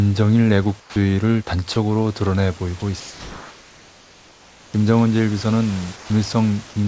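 At 0.80 s the speech drops into a flat hiss for 160 ms, losing about 60 ms of sound. At 1.74 s a 20 ms sliver vanishes the same way. Both are sound dropped by the voice detector, likely because the sender judged the sound to be background.

From 3.00 to 4.74 s, and again from 5.96 to 6.10 s, the room's natural background becomes a smooth, featureless hiss, about 3 dB and then about 4 dB quieter. This is comfort noise in place of the background, likely from discontinuous transmission, where the receiver fills pauses with synthetic noise.

Nothing above 8 kHz is present anywhere in the clip, which fits a G.722 call path.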